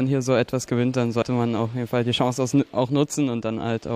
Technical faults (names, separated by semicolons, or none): damaged data in a compressed stream